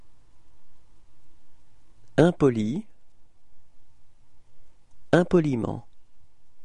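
No technical faults can be heard anywhere in the audio.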